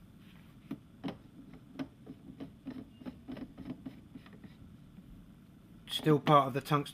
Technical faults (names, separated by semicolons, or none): none